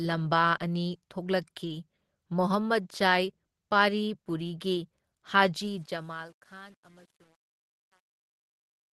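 At 1.63 s a short stretch of speech, about 100 ms long, turns rough and noisy, then clears by 1.73 s. This is a lost packet rebuilt from error correction. Packets went missing on the way, but the following packets each held a cheap, low-bitrate copy of the one before. The decoder played those copies instead of leaving a gap. The rebuilt audio, about 60 ms of it, fits three lost 20 ms packets. Nothing drops out, but the texture degrades briefly.

From 5.56 s to the end, the clip fades out from around 5.5 s. Under it there is truncation distortion on a fade. The gain stage kept too few bits and added no dither, which fits roughly 9-bit resolution. As the level falls, the waveform collapses into coarse square steps. From 5.87 s onward the tail grows gritty, under the Opus call path's coding noise.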